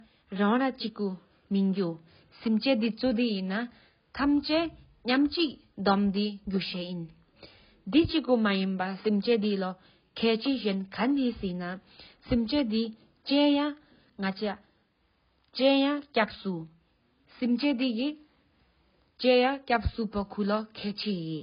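Speech throughout has nothing above 5.1 kHz and carries the smeared, warbling artefacts of a very low-bitrate codec, though the MP3 fits a high bitrate. The likely cause is low-bitrate audio saved at a high bitrate, since a simple low-pass filter would leave no artefacts.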